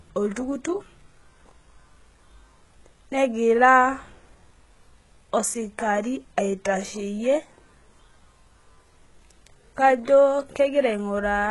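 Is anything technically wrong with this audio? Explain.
Yes. Throughout, the treble sounds gritty and metallic, with nothing above 11.5 kHz. This is likely HE-AAC compression, its treble rebuilt from copied lower bands, which fits a very low bitrate near 12 kbps.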